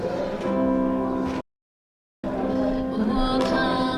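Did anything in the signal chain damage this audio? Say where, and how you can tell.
Yes. The damage sits at the playback stage. At 1.41 s the sound stops in mid-flow and stays silent until 2.24 s, a gap of about 0.83 s. That is a playback stall. The output does not fade or click into noise. It simply halts, then resumes. The likely cause is the player running dry of buffered data or its output thread being blocked, so nothing reached the converter until it recovered.

From 2.24 s to the end, the audio is hurried. It runs about 1.25 times faster, yet the pitch stays normal. That is time-compressed catch-up. After the stall the player holds a backlog. It trims it by removing small slices and cross-fading the joins. The unchanged pitch shows this is not a simple resampling speed-up.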